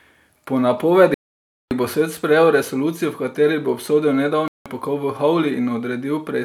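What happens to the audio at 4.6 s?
A likely Bluetooth stall: delayed packets drained the playback buffer, so after "v kateri bo obsodil" the sound goes silent from 4.48 to 4.66 s, then resumes at "pokol v".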